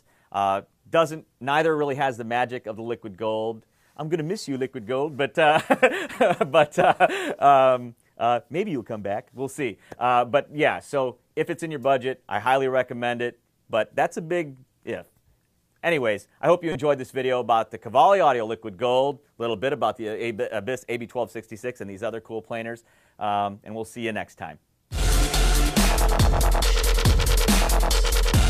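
At 16.72 to 16.76 s there is a corrupt frame decoded: a single compressed frame arrived with damaged bits and the decoder played it out instead of concealing it. Misread gain values and spectral codes placed energy in the wrong frequency bands for the roughly 30 ms span of that frame. The result is a short chirp, squeak, blip or burst of noise, peaking at around -15 dBFS, then vanishes as the next intact frame decodes.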